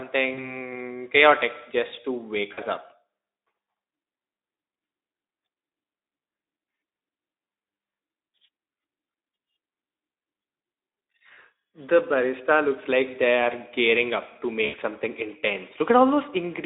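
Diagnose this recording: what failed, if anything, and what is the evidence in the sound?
Network stage, VoIP packet loss concealed by the speech codec: brief smeared fades at 0.33–0.58 s, 2.53–2.59 s after "just to wake", 11.33–11.38 s, and 14.65–14.75 s after "are gearing up to". The decoder extrapolated its last pitch and filter through gaps of about 40 ms, or 80 ms at the last event.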